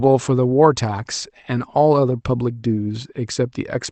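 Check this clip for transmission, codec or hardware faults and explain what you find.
Nothing to flag: the speech carries the ordinary character of an Opus call path, band-limited to about 8 kHz, with no dropouts, glitches or device trouble audible anywhere.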